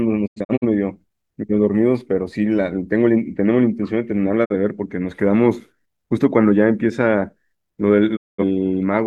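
Digital broadcast dropout at 0.26–0.65 s, 4.44–4.54 s and 8.15–8.44 s: the receiver lost valid frames and muted, fading out over 20 ms. The first has scattered holes totalling 171 ms, the second 43 ms, the last 213 ms, with that sound simply gone.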